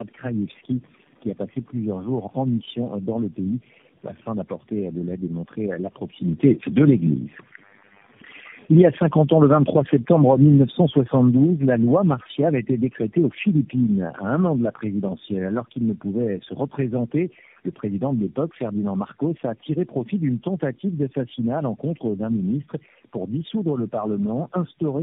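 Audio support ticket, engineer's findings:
Tandem speech coding, throughout: rough, muffled, warbly speech, nothing above 3.7 kHz; fits four narrowband speech codecs in series, each re-encoding the previous decoder's degraded output.

Automatic gain falling, 8.59–14.68 s: level and background sink together by about 11 dB; AGC judged input too loud or its background noise too strong and ramped its gain down gradually.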